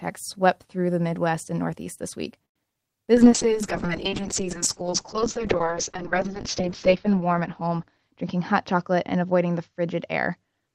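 At 2.45 s the speech stops for about a tenth of a second, running to 2.58 s, and that's most likely a call audio freeze. Packets got held up in transit, the jitter buffer ran dry, and the receiver carried the last bit of sound forward briefly before going quiet for roughly 100 ms. When audio resumes it picks up right where it left off, so nothing's actually lost. You just get a little pause pushed into the speech.

Right after that come two bits of short concealed packet loss. The first is at 2.70 s, where about 20 ms never made it to the decoder in time. It's patched almost entirely by closing the gap, which claws back around 20 ms of the delay the freeze added. The second runs from 2.74 to 2.89 s. Another 20 ms goes missing and gets filled by extending the last sound and blending back in, so you hear a quick smear or wobble in the speech there.

From 3.15 s to the end there's a call bitrate drop. 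The bandwidth estimate fell and the encoder was pushed from 32 kbps down to 6 kbps, bottoming out there for about 3.3 s. At that rate the audio bandwidth shrinks from 20 kHz to 8 kHz, so the top end disappears and the speech goes muffled and a bit rough and watery.

Between 7.98 and 9.46 s there's a jitter buffer speed-up. The buffer was holding more audio than it wanted, so the receiver trimmed out small pitch-period chunks over and over, about a tenth of a second in total. That plays the speech at 106% speed without changing the pitch, so that stretch sounds a little rushed.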